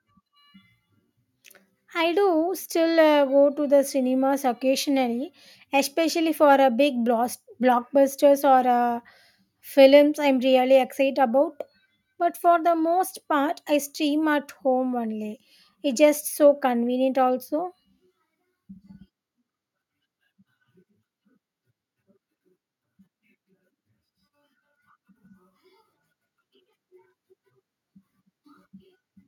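No technical faults occur at any point in this speech recording, so there are none to describe in time order.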